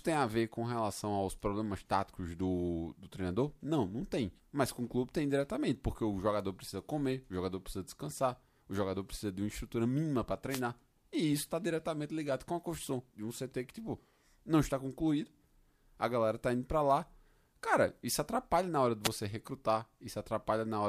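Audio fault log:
10.49–10.61 s and 19.03–19.09 s: wireless microphone noise hit, heard as brief bursts of static after "uma estrutura mínima para" and after "atrapalha na hora de". The FM radio link fades as reflected paths cancel, so receiver hiss rises.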